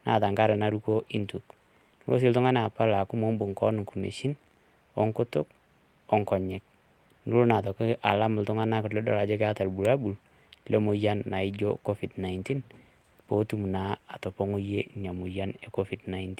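No technical faults can be heard anywhere in this speech recording. Nothing in the audio calls for a timestamp or a closer look.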